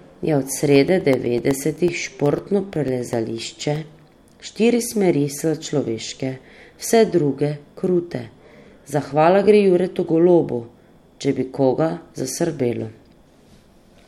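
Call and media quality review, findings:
Periodic USB or driver dropouts, 0.63–4.13 s. Regular ticks every 0.125 s, about 1 ms gaps filled with silence, roughly thirty. Audio driver or USB bus blocked by recurring background task.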